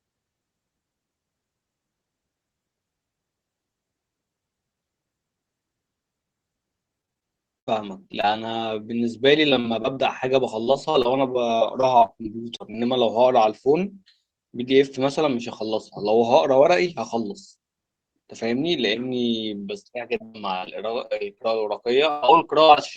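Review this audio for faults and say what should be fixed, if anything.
Repeated packet loss (robotic sound) occurs at 7.01–7.23, 7.59–8.26, 9.50–9.98, 10.64–12.77, 20.16–20.68, 21.06–21.46 and 22.10–22.78 s. Short holes open in the speech, up to 121 ms long. Each is patched by stretching the last sound, which makes it choppy. Adding forward error correction and a deeper jitter buffer would prevent this.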